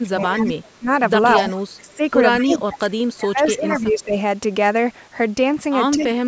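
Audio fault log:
0.02–4.16 s, speech suppressed in double talk: the speech dips and drops out in patches, about 2 s in all, falling up to about 20 dB. The likely cause is an echo canceller that turned down the talker along with the far-end echo while both sides spoke.
0.37, 1.36, 2.39 and 3.49 s, echo leak: brief repeats trail the sound by 215 ms, about 30 dB down at first, rising to about 15 to 20 dB below the speech by 2.39 to 3.81 s. The likely cause is loudspeaker pickup that the echo canceller failed to remove.
5.96–6.26 s, speech suppressed in double talk, with an echo leak at 6.0 s: the speech is pushed down by up to about 25 dB over roughly 0.3 s, and a faint echo about 25 dB down slips through at the same 215 ms delay. The likely cause is the same canceller clamping down during overlapping talk.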